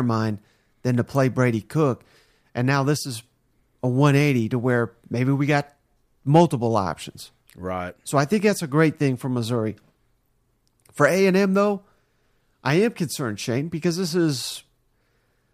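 No technical faults can be heard anywhere in the speech recording, with the signal holding steady and intact throughout.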